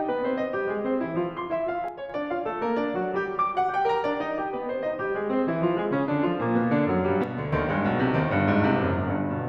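At 1.88 to 2.10 s and again at 7.24 to 7.53 s, the music abruptly drops about 6 dB, then snaps back. This is likely one channel dropping out: the mono sum loses half its shared content.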